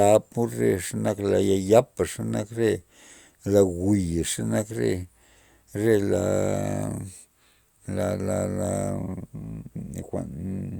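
Listening to the speech from beginning to end, nothing stood out as a technical fault.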